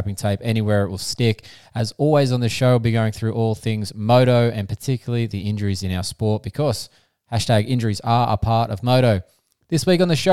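No technical faults can be heard anywhere in the recording; the speech signal stays continuous and stable throughout.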